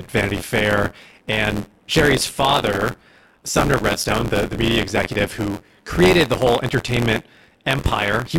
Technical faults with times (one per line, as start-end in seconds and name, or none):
0.00-8.39 buffer tearing